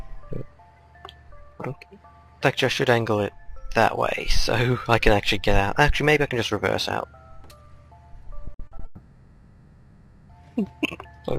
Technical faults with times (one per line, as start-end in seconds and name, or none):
8.45-8.81 repeated packet loss (robotic sound)
8.85-10.31 long network dropout